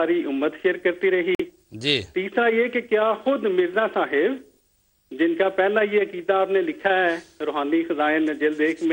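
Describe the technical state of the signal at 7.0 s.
Around 7.0 s the signal is intact, with no audible dropout, distortion or other technical fault at that point.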